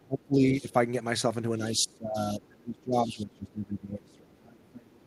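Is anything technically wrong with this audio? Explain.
Yes. An echo canceller that likely could not separate the talker from loudspeaker echo during double talk ducks the speech by up to about 25 to 30 dB, causing speech suppressed in double talk from 0.0 to 0.74 s, 1.72 to 2.18 s, and 2.34 s to the end. The other side's voice leaks through where, likely, the echo canceller left residual loudspeaker pickup in the microphone signal. It is heard as faint scraps about 20 to 25 dB below the speech at 0.45 to 0.52 s, 2.33 to 2.38 s, and 3.05 to 3.25 s.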